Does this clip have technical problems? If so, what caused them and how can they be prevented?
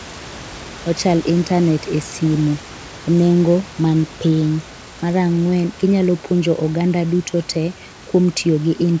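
No, nothing stood out on listening to this speech clip, so there is nothing here that needs preventing.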